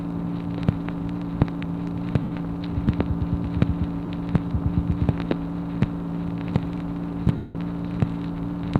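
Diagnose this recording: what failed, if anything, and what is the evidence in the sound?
Lost LE Audio frames on the Bluetooth link: LC3 concealment smears the sound at 2.23–2.31, 4.06–4.08 and 7.36–7.55 s, and the 190 ms gap fades out.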